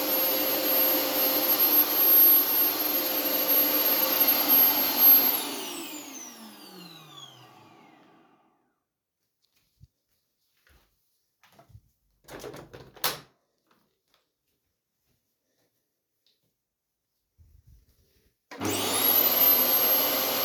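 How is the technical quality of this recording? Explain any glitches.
No glitches, dropouts or other technical faults are audible anywhere in this recording of sounds.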